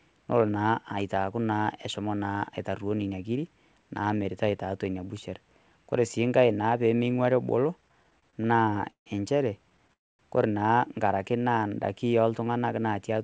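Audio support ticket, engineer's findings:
Repeated stalls (stutter), 7.82–9.08 s, after "enkai naa pemeing'uari ebolo", up to "enchere kore naa". Jitter buffer underrunning repeatedly as late packets arrived; 15 short gaps filled with continued sound, 326 ms total, longest 154 ms, about a quarter of the span. Many brief hitches, not one dropout.

Call audio freeze, 9.93–10.21 s, just before "kore naa". Single 258 ms hold, most of it (about 240 ms) faded to silence, then audio resumes where it stopped with nothing lost. Likely packets delayed in transit emptying the jitter buffer. One long gap, unlike the stutter's scattered short ones.

Jitter buffer slow-down, 11.32–11.70 s, right after "enchere kore naa". Receiver repeating pitch periods to rebuild its reserve, adding 62 ms; audio runs at 86% speed, pitch unchanged, drawn out. No gap or fade, which separates it from the stalls. Band limited to 8 kHz throughout, consistent with the G.722 call path.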